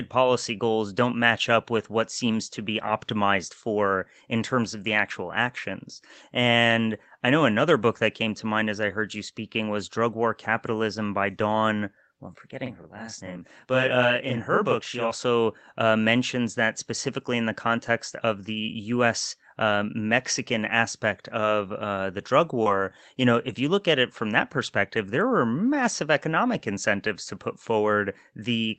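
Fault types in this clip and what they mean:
Lost packet rebuilt from error correction: Audio missing after "what seems to be" at 2.83 to 2.89 s, and a 20 ms stretch at 22.65 to 22.67 s, were replayed from low-bitrate redundant copies. There is no gap, but those moments sound rougher and noisier than the surrounding Opus-coded speech.
Channel delay (doubling): From 12.66 to 15.11 s, just after "well I'm", one channel runs 40 ms behind the other. Once the two are summed to mono, the late copy sits at equal level and is heard as a distinct doubling or slap rather than a single voice.
Short concealed packet loss: At 22.63 to 22.67 s, between "of uh the drug" and "you know if you", about 20 ms never arrived and the decoder extended the preceding sound to cover it. This leaves a brief smear or wobble where that fragment should be.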